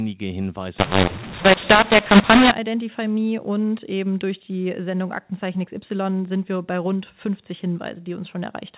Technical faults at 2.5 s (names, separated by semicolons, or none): mu-law and A-law mixed up